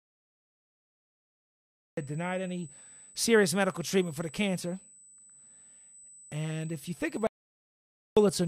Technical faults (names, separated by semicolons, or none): USB whine; cut-off start; audio dropout to silence